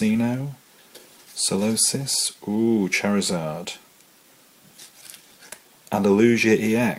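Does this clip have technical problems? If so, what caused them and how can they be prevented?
Yes. Clock drift between sender and receiver runs through the whole clip, with the sender's clock about 5 percent fast. The receiver's jitter buffer keeps overfilling, unlike packet loss, which leaves random gaps rather than a steady one-way timing pull. Locking both ends to a shared clock or using adaptive resampling prevents it.

Repeated timing corrections run from 0.15 s to 6.76 s as small, unevenly spaced edits. The receiver trims short pieces to absorb the 105 percent sender rate, so everything skips forward and nothing repeats. This is unlike jitter, which stutters both ways. Smooth drift compensation by resampling instead of cutting prevents it.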